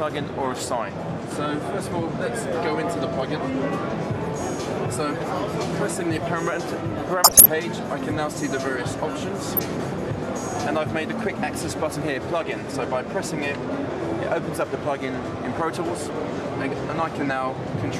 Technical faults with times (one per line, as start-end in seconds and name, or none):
7.24-7.46 corrupt frame decoded
9.55-9.59 corrupt frame decoded